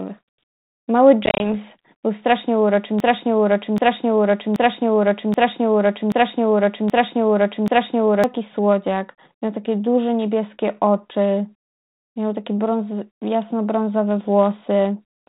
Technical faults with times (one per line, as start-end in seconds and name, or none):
1.26-1.49 packet loss on an ADPCM call
3.00-8.24 broken-record loop